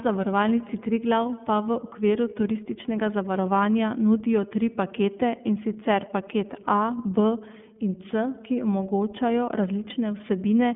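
Speech, coded with the iLBC codec from start to finish. Nothing passes above about 3.7 kHz, and the low end thins out below 150 Hz, so the sound is narrowband telephone quality. The codec damage is plainly audible. Each frame's excitation is coded on its own, and the sound comes out rough and slightly synthetic. The coarseness points to 30 ms frames, which fits the 13.33 kbps mode.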